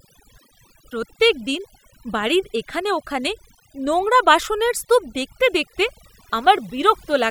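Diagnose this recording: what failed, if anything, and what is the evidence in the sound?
The failure is overdone noise removal at the call-processing stage, present for the whole speech recording. Between phrases the background drops to near silence dotted with twinkling specks. The suppressor is pushing individual frequency bands down hard wherever they sit close to its noise estimate, taking quiet voice detail with them. Unlike a low-bitrate codec, the damage follows the noise floor rather than smearing transients.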